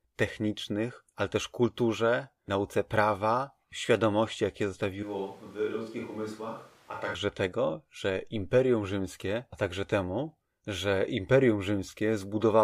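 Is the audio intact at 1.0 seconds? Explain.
Yes, at 1.0 seconds the speech plays through intact, with no audible dropout, click, distortion or other fault at that moment.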